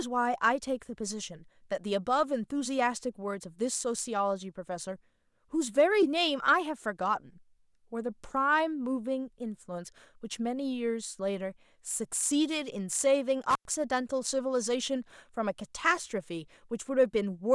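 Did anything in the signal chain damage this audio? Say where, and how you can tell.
Yes. The damage is in the analogue wiring. Between 13.50 and 13.70 s the speech drops out abruptly, with a crackle at the moment it disappears and another as it returns. In between, for roughly 100 ms, only faint hiss remains. That is an intermittent contact: a loose plug or cable conductor briefly lost its connection, breaking the signal path, and the rough making and breaking of the contact produced the crackles at each edge.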